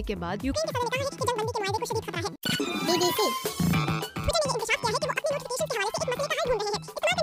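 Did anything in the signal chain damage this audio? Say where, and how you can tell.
Yes. At the sample-format conversion stage, the reader took the stream two samples at a time, as if it were stereo or double-width. From 0.53 s to the end, the audio runs at twice speed and an octave higher.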